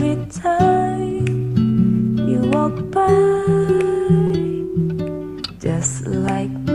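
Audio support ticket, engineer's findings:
Short concealed packet loss, 4.27 to 4.32 s. Brief smear or wobble, then normal sound resumes. Roughly 20 ms of audio never arrived at the decoder in time. Receiver-side concealment covered the gap with about 23 ms of synthesized continuation of the preceding sound, then cross-faded back. Probable component: network path or jitter buffer upstream of the decoder. Isolated event.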